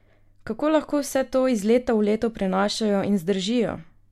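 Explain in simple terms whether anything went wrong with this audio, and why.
Nothing went wrong here, as far as the ear can tell: the speech runs along steadily the whole way, with nothing that sounds broken or out of place.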